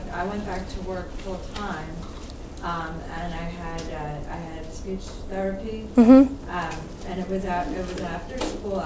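No technical faults can be heard anywhere in the clip. It has passed through a WebRTC call path working as intended, and the band stops at 8 kHz, which fits a wideband call codec such as G.722.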